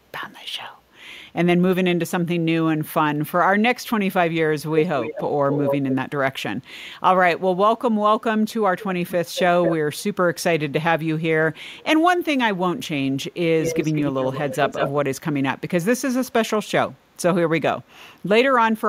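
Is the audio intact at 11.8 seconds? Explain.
No. From 11.78 to 11.84 s a brief, very faint scrap of the speech returns about 223 ms late, sitting far below the live voice. This is an echo leak, likely from a far-end loudspeaker whose echo canceller let some of the microphone pickup through.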